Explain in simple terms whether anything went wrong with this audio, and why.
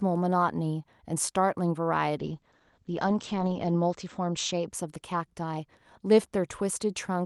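From 2.21 to 4.77 seconds there is a call bitrate drop. The call's connection estimate fell, forcing the Opus encoder to use far fewer bits, at its worst for about 1.5 seconds. The speech turns rough and muffled, losing its crisp top end, until it recovers.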